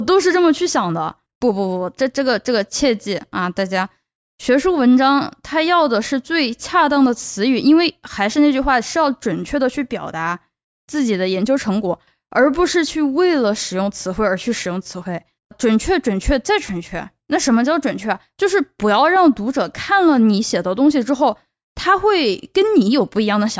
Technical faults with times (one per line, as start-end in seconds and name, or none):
none